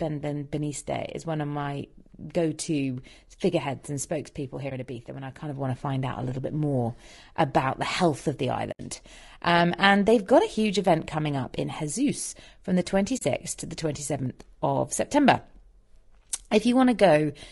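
Speech running through what is likely low-delay AAC compression (AAC-ELD) at a low rate, around 32 kbps, so the voice sounds rough and grainy throughout, with noise between the harmonics and a thin, synthetic-sounding top band. AAC frame loss with muting follows: where frames are missing, the decoder zeroes their spectrum and the overlapping windows fade the sound out and back in, leaving a brief dip at 4.69–4.72 s (a gap of about 20 ms, fitting one lost frame) and soft-edged holes at 8.71–8.80 s (about 80 ms, fitting four frames) and 13.17–13.22 s (about 40 ms, fitting two frames).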